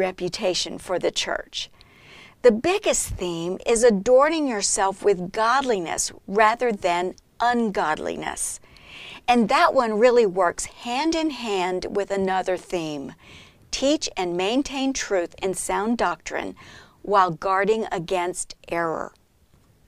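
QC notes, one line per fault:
Nothing stood out on listening to the speech in this clip.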